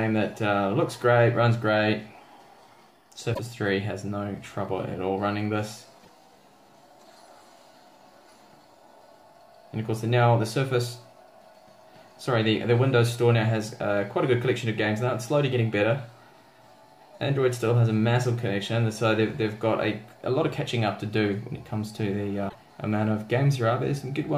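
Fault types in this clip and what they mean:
Broken MP3 bit reservoir: frames were likely cut from the stream, so the next frames fetch borrowed data from the wrong bytes. The sound jumps ahead and garbles for two or three 26.1 ms frames, at 3.33–3.39 s, 6.02–6.09 s and 22.48–22.55 s.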